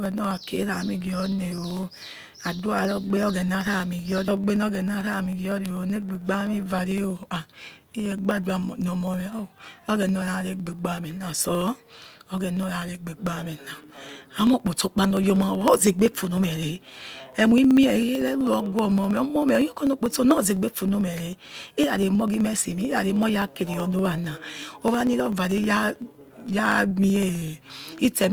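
From 0.06 s to 28.24 s the speech carries periodic USB or driver dropouts: every 63.5 ms, about 16 times a second, a sliver of audio well under a millisecond long is skipped outright, so the waveform jumps and leaves a tiny tick. Unlike random crackle or dust-like clicks, these ticks keep a strict, even rhythm, and they vanish in pauses because a skip in silence leaves no discontinuity to hear.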